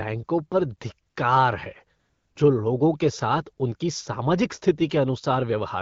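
At 1.09 to 1.15 s and again at 1.99 to 2.35 s, just before "जो लोगों के साथ", AMR comfort noise takes over. The phone treated these gaps as silence and sent no speech frames. The real background drops to a smooth, steady hiss for 60 ms, then for 360 ms.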